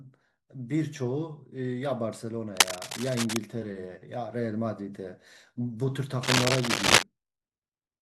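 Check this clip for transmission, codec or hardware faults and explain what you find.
The clip has a hardware fault. Cable scratch noise occurs from 2.57 to 3.38 s and from 6.23 to 7.03 s. It is likely a worn cable or connector being moved, with its contact resistance jumping rapidly. This produces dense, ragged scratching somewhat louder than the speech.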